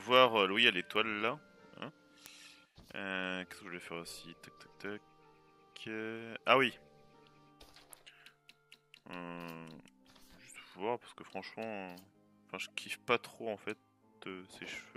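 From 0.30 to 14.95 s, sharp word clock ticks recur about every 0.3 s. An unlocked receiving clock slips one sample each time.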